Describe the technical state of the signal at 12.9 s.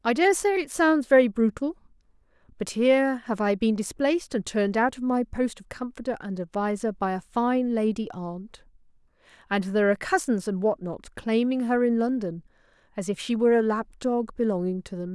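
At 12.9 s the speech signal is intact, with no dropout, clipping, glitch or other fault to be heard at that moment.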